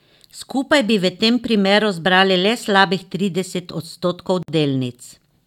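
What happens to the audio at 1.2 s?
Nothing goes wrong at 1.2 s; the speech there plays through cleanly, with no dropout, click, distortion or other technical fault.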